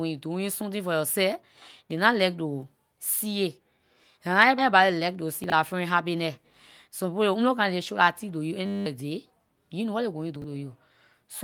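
This speech clip has four kinds of fault. At 4.58 to 4.60 s there is a skip ahead. Roughly a second of audio is gone. Nothing fills the gap. The two sides are joined almost directly, so the speech lurches forward. This happens when later audio is already waiting and the earlier stretch is dropped, either in transit or by an overflowing jitter buffer. The delay shrinks by about the same second.

Right after, from 4.72 to 5.81 s, comes a jitter buffer speed-up. The speech runs at about 108 percent of normal speed. The pitch stays the same. The receiver is trimming tiny slices of one or a few pitch periods, again and again, to drain excess buffered delay. In total it removes something like a tenth of a second. The result sounds hurried.

Chunks out of order appear twice, at 5.44 to 5.52 s and 10.36 to 10.44 s. Each time a 20 ms chunk plays three chunks late, after the audio meant to follow it. 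Nothing is lost. The order is scrambled, though, and the three hard joins give a brief jumbled patch. The first instance falls inside the sped-up stretch.

At 8.66 to 8.86 s there is a system hang loop. A 10 ms piece repeats 20 times. Because the loop is so short, it becomes a steady buzz at 100 Hz rather than a stutter. The system stalled while the sound hardware kept cycling its ring buffer, and about 200 ms of real audio is lost.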